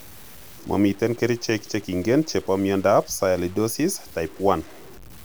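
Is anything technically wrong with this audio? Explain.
Yes. Low bit depth without dither runs throughout the speech, from start to finish. The audio sounds as though it was likely reduced to about 7 bits by truncation, with no dither added, so the rounding error tracks the signal instead of forming a steady hiss. The result is a grainy, rasping distortion, roughly 25 dB below the signal, that changes with the speech, growing gritty on quieter passages and sputtering as the quietest sounds fall between steps.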